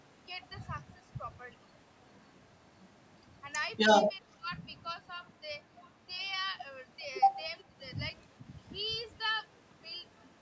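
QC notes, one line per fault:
4.21–4.49 s, speech suppressed in double talk: the speech dips in level for about 150 ms in total, at deepest roughly 15 dB down, likely because an echo canceller mistook overlapping talk for echo and ducked it. On the waveform the envelope pinches in; the spectrogram shows harmonics fading briefly.
7.60–7.64 s, echo leak: a faint, brief copy of earlier speech returns about 0.4 s late, very low, around 40 dB under the speech, likely loudspeaker pickup the canceller failed to remove. A spectrogram shows a weak repeat of the earlier pattern; the waveform barely changes.
7.69–7.75 s, speech suppressed in double talk: a shorter dip of roughly 70 ms, around 10 dB at deepest, likely the same suppression acting during overlapping talk. The waveform shows a small notch in the envelope, and on the spectrogram the harmonics fade momentarily below the band's 8 kHz ceiling.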